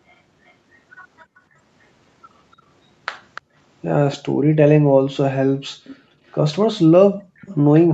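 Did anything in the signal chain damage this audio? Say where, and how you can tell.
Yes. A faint delayed copy of the speech trails it by 294 ms at 0.09–1.4 s, 2.52–4.17 s, 5.84–6.34 s and 7.39–7.55 s, barely audible at first and later about 20–25 dB down. This echo leak is likely residual loudspeaker pickup that the far-end call processing's echo canceller failed to remove.

The room background briefly dips out at 1.25–1.36 s (about 30 dB) and 3.41–3.55 s (about 38 dB), each lasting a tenth of a second or so, inside the echo stretches. This is background gated by the echo canceller: its suppressor clamped the microphone while the loudspeaker played.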